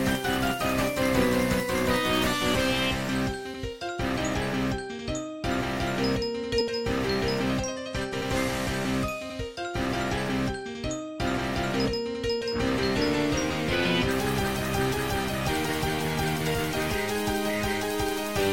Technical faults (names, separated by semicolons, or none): compressed frames skipped